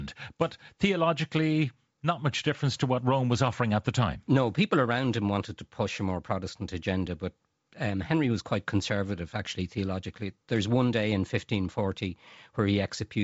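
No technical faults are audible in this speech.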